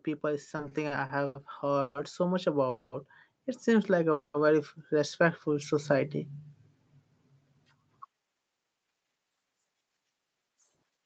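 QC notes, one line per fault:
0.21–3.06 s and 3.64–6.18 s, automatic gain rising: the level climbs gradually by about 5 dB and then about 4 dB as the gain control lifts a quiet input. Voice and background noise floor swell together. The waveform envelope ramps upward, and the spectrogram brightens evenly across all bands.
0.49–1.37 s, repeated stalls (stutter): seven short waits, the longest 90 ms and 210 ms in total, fill about a quarter of this span. The receiver stretches the last sound each time packets fall behind, so nothing is lost but the speech drags and stutters. The spectrogram shows smeared, repeated frames.
1.81–1.97 s, 2.69–2.94 s and 4.12–4.36 s, call audio freeze: the sound hangs as a fading buzz for roughly 140, 230 and 220 ms, with a brief 20 ms dip to silence in the last. Packets were likely held up in transit, emptying the jitter buffer. Playback then resumes where it stopped, adding delay. 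The spectrogram shows flat, decaying horizontal streaks.
8.06–11.06 s, jitter buffer speed-up: the speech runs at about 112% speed with unchanged pitch, and about 0.4 s is trimmed as the receiver drains an overfull buffer by cutting pitch-period-sized slices. Syllables sound hurried. Onsets crowd closer in the waveform, and the harmonics stay at the same height on the spectrogram.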